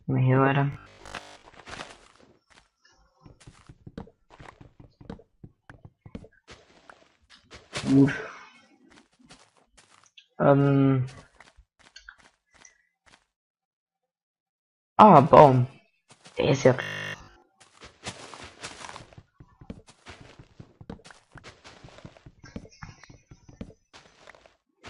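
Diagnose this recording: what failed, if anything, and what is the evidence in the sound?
A rigid, metallic buzz pitched at 50 Hz replaces the natural texture of the sound from 0.73 to 1.43 s and again from 16.82 to 17.42 s, with most of the material in those stretches repeated rather than new. This is robotic sound from repeated short buffers, likely a starved driver or buffer stage. It kept looping the last 20 ms chunk while fresh audio was dropped, and that 20 ms period imposes the fixed 50 Hz tone.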